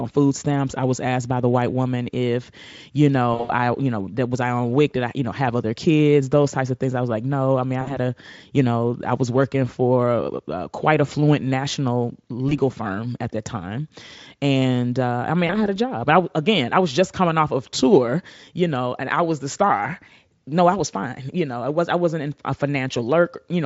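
VoIP packet loss concealed by the speech codec breaks in at 3.33–3.52 s after "white woman if you", 7.81–7.97 s after "no i mean i", 12.49–12.59 s, and 15.47–15.68 s after "and uh i mean". Each time, the Speex decoder, otherwise with none or faint damage, extrapolates its last pitch and filter, stretching sound into a fading buzzy tone or coloured noise that stays weakened briefly after packets resume.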